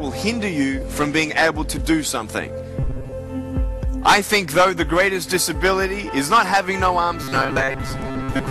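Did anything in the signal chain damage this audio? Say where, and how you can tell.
Yes: robotic sound from repeated short buffers, at 2.80–3.13 s and again from 7.23 to 8.51 s. A rigid metallic buzz at 134 Hz sits on the sound, likely a starved driver buffer looping a block of about 7.5 ms, so roughly half the audio is repeats.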